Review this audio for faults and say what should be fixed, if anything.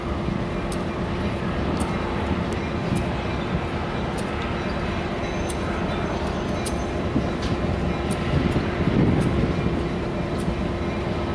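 No faults; nothing needs fixing.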